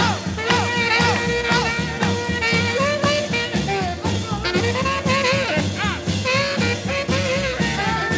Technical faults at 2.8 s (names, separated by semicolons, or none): none